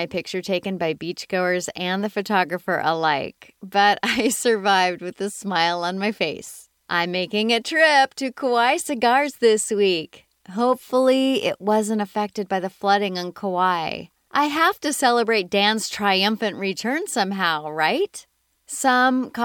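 Nothing here calls for comment, since no technical faults turn up anywhere in this speech recording.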